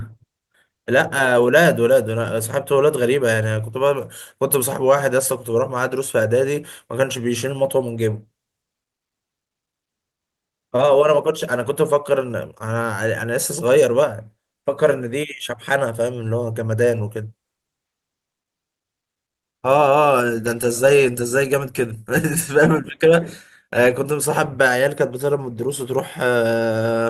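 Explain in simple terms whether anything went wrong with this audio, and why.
Nothing went wrong here as far as I can hear, so there's simply no problem to explain; the speech comes through steady and untroubled all the way along.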